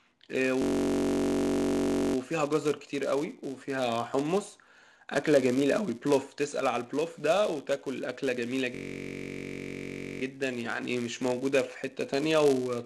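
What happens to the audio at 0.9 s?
At 0.9 s the audio is caught in a system hang loop running from 0.62 to 2.16 s. The machine stalled while the sound hardware kept replaying one 21.33 ms slice, which fits a 1024-sample buffer, 72 times over. It comes out as a steady 46.9 Hz buzz. On a waveform it shows as one identical segment tiled end to end, and a spectrogram shows regular vertical striping with harmonics spaced about 47 Hz apart.

Underneath that, the filter restarted on every block is also present. Starting each block from a blank state puts a small transient at every boundary, giving a 200 Hz buzz that rises and falls with the signal's level. This appears as tiny spikes every 5 ms in the waveform and as a horizontal line at 200 Hz, with its harmonics, on the spectrogram.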